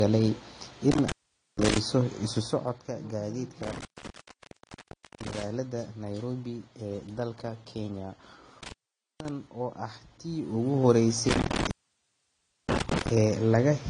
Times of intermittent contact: 0.92-1.78, 3.63-5.43, 8.63-9.29, 11.29-13.09

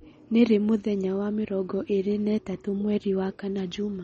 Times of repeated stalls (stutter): none

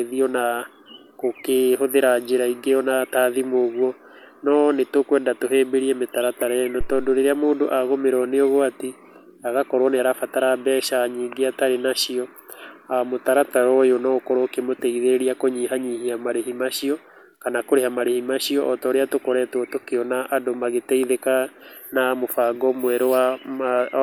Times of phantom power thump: 6.81-7.24

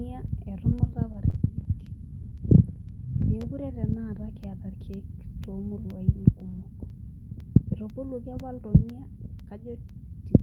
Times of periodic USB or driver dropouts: 0.28-10.40

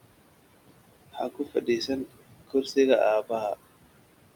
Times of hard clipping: none

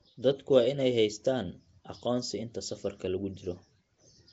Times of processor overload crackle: none

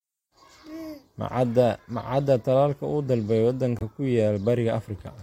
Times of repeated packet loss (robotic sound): none

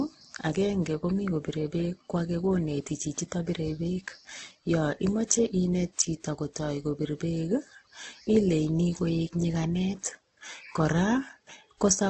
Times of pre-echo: none

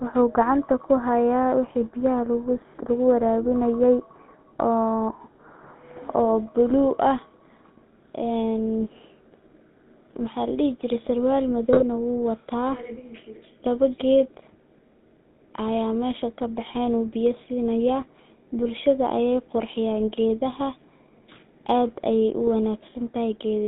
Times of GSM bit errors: 11.69-11.83, 22.47

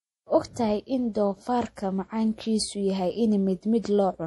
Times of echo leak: none

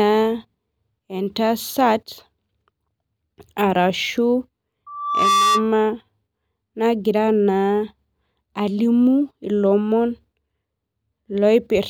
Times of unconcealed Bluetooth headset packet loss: none

